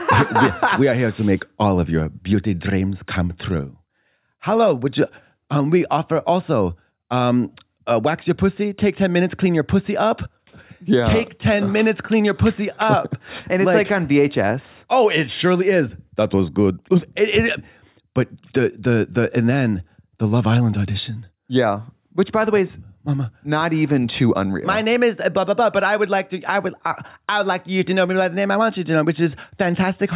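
No technical faults are audible.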